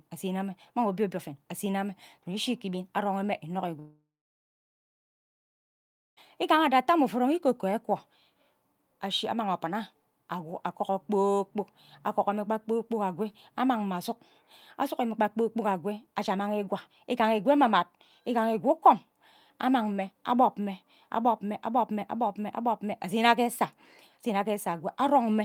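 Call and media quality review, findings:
Long network dropout, 3.79 to 6.19 s. Speech stops for about 2.4 s. The last sound carries on briefly as a fading buzz, then goes to near-silence for about 2.1 s. Speech resumes past the gap, and the lost stretch never returns. Likely cause is packet loss on the network path. Receiver concealment stretches the final received audio, then decays it to silence.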